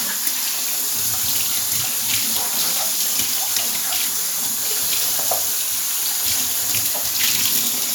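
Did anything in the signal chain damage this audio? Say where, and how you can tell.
No, no faults are audible.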